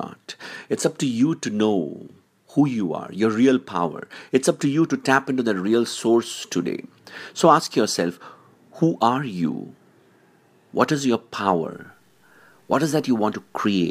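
From 11.73 s, right after "is your", to the end, low bit depth without dither makes the speech grainy. Likely cause: truncation to 10 bits, leaving distortion about 45 dB below the signal.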